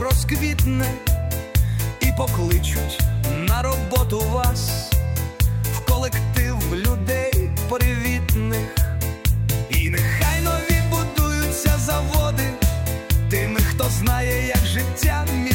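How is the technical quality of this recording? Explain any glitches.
The technical quality of the recording holds up, and there are no glitches to explain.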